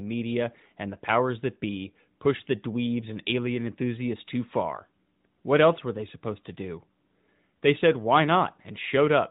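No faults can be heard: the speech carries the narrow, telephone-like band of a mobile AMR narrowband call, with nothing above 4 kHz, and no dropout, glitch or other disturbance breaks into the signal at any point.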